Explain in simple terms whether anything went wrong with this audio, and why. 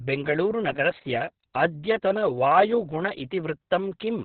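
Yes, the whole speech clip, from the very start to the end, has been squeezed hard by Opus voice compression. It's running in its speech-only mode at a very low data rate, so everything above roughly 4.5 kHz is simply gone, giving that narrow, phone-line sound. On top of that, the coder rebuilds the voice from a rough model rather than the real sound, which is why it comes across muffled, a bit hoarse and slightly robotic.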